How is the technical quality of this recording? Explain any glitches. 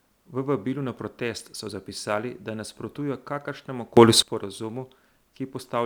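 The recording has one clear glitch, a sudden gain jump from 3.97 to 4.22 s. The likely cause is a digital gain setting applied instantly rather than ramped, so the level steps from one sample to the next and then steps back. The speech and the background noise rise together by about 18 dB for roughly a quarter of a second, then drop back just as abruptly.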